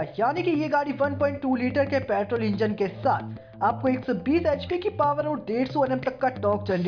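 No technical faults can be heard anywhere in this audio. Nothing in the sound points to a problem at any moment.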